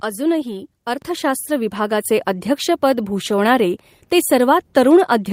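At 1.02 s the microphone volume is stepped up: the input gain on the capture device is raised in a single jump of about 7 dB, so the speech and the background noise both get louder at the same instant. That shared jump separates it from a talker simply speaking up, where only the voice would rise.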